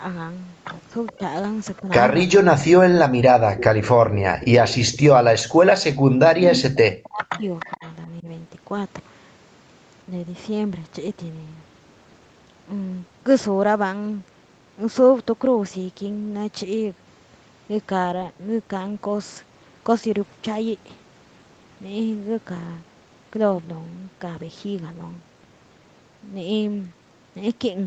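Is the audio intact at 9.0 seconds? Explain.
Yes, the speech at 9.0 seconds is intact, with no fault at that moment.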